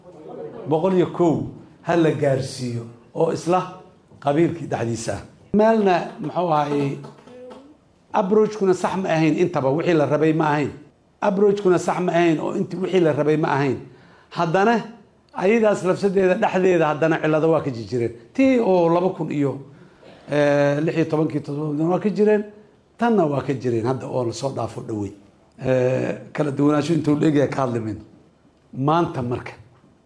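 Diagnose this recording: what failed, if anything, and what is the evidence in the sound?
Nothing here points to a failure at any stage, since the recording gives no sign of a fault anywhere along the chain.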